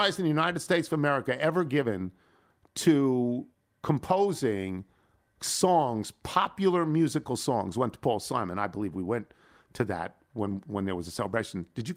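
No technical faults are audible anywhere in the recording.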